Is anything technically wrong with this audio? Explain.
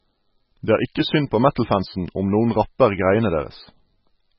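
Yes. Throughout the speech, heavy MP3 compression is the likely cause of the damage. The encoder was starved of bits, which fits a very low bitrate around 16 kbps, so it discarded the treble entirely, leaving nothing above 5.5 kHz, and zeroed weaker frequency lines that then flicker on and off from frame to frame. The result is dull, muffled speech with a watery, swirling texture, metallic chirping on s sounds, and smeared consonant attacks.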